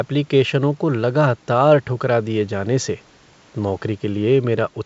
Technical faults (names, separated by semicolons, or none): none